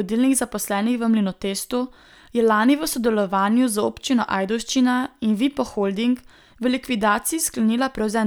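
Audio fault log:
No faults are heard in the speech. Nothing in the recording calls for a timed entry.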